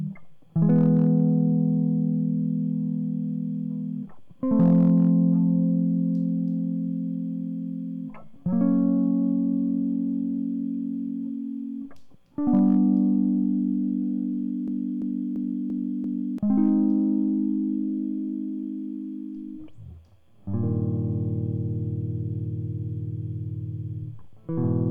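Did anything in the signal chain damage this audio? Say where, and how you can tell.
Yes. Hard clipping at the converter or sample-format stage flattens peaks at 0.63–1.22 s, 4.60–5.09 s, 12.55–12.77 s and 16.60–16.69 s. The music is overdriven by about 0 to 3 dB, giving flat-topped waveforms and bright harmonic smearing on the spectrogram.

A system hang loop in the driver or buffer stage runs from 14.68 to 16.38 s. A 341 ms chunk repeats five times at 2.9 Hz, which fits a 16384-sample buffer, and about a second and a half of music is lost. On the waveform these show as identical repeating blocks, and on the spectrogram as regularly spaced vertical seams.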